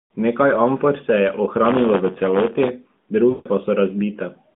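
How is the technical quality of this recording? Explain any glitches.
The recording has one clear glitch. It is narrowband phone audio, limited to roughly 150 Hz to 3.6 kHz and coded with AMR-NB at 12.2 kbps, with only light coding damage.

From 3.30 to 3.48 s there are lost AMR speech frames. The decoder lost about 160 ms, which fits a run of eight 20 ms frames, and kept replaying its last pitch and vocal tract settings at falling gain. The result is a stretched, smeared sound that fades away. A plain network dropout would instead cut abruptly to silence or a click.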